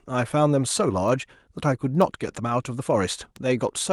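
Three sharp ticks cut through the speech at 1.08 s, 2.02 s and 3.36 s, each instantaneous, broadband and unrelated to the surrounding sound. These are bit error spikes: a flipped bit in memory or on a digital link throws a sample's value off by a power of two before it snaps back. The first is a single corrupted sample, while the later two hit two and three adjacent samples respectively.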